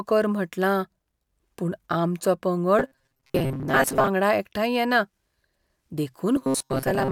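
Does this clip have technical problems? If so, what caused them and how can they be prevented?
Yes. From 2.79 to 4.08 s, just before "एकठांय येना", and again from 6.36 s to the end, the speech collapses into a rigid metallic buzz locked at 133 Hz. This is robotic sound from repeated short buffers. Audio likely arrived too seldom, so a roughly 7.5 ms slice kept being replayed in place of about half the real signal. A larger jitter buffer and steadier audio delivery would prevent it.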